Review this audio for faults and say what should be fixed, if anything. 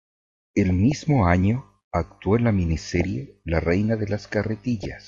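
Throughout, the speech sounds dull and carries a gurgling, granular distortion, with upper sub-bands flickering on and off and the remaining ones coarsely quantised. This is likely MP2 compression at too low a bitrate, which fits a stream of around 80 kbps that is starving Layer II of bits. Re-encoding from the original source at 160 kbps or higher would keep the upper bands active.

DAB burbling appears at 0.70–0.92 s, 2.87–3.05 s and 4.80–4.86 s as bursts over the speech. Bit errors that slip past the error correction corrupt samples, putting short blips of noise in single sub-bands, and where they get through, corrupt scale factors make individual sub-bands jump in level for up to a frame. The sound points to a bit-error rate of a few tenths of a percent. Better reception, through a stronger signal, a better antenna or a higher protection level, would keep these errors out of the audio data.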